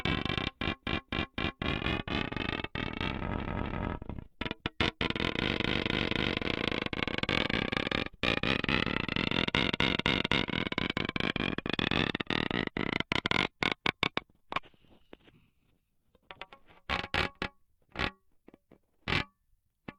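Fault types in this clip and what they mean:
Repeated frames: at 0.79–1.56 s, 3.35–3.86 s, 5.57–6.34 s and 9.62–10.39 s the same 256 ms block of sound plays again and again, three extra times in most runs and twice at 3.35 s. This suggests a chunk of compressed frames was written or sent more than once. The decoder replays the chunk faithfully, so each run is heard as a stutter and lengthens the audio by 768 ms, or 512 ms at 3.35 s.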